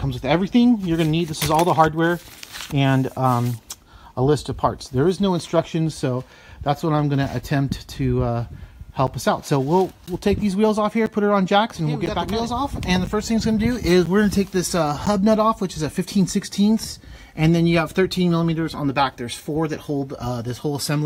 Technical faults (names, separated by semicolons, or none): periodic USB or driver dropouts